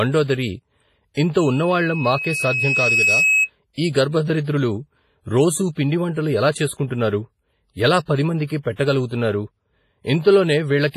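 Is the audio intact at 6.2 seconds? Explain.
No. At 6.2 s, as throughout the clip, the speech sounds heavily ringing and washy, with hiss breathing along with it and nothing above 15.5 kHz. The cause is likely WMA compression, its long transform blocks smearing quantisation noise, fitting roughly 24 kbps.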